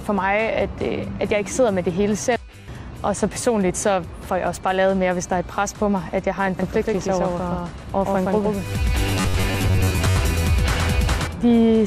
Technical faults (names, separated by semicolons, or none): MP2 compression; DAB burbling; doubled audio track; robotic sound from repeated short buffers